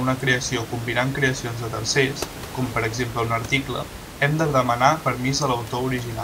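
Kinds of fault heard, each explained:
Nothing stood out on listening to this speech recording.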